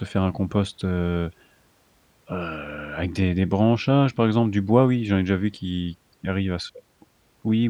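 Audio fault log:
There is no fault in this speech audio.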